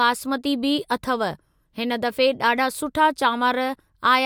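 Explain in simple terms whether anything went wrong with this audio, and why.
Nothing went wrong with this recording. The speech comes through steadily, with no dropouts, clicks, glitches or sudden changes anywhere in it.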